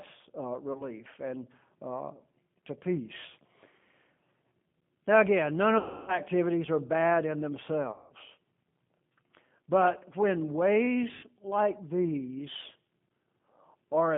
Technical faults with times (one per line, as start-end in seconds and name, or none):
0.00-14.17 G.729 codec
0.73-0.84 VoIP packet loss concealed by the speech codec
5.78-6.17 VoIP packet loss concealed by the speech codec
7.92-8.13 VoIP packet loss concealed by the speech codec
11.15-11.27 VoIP packet loss concealed by the speech codec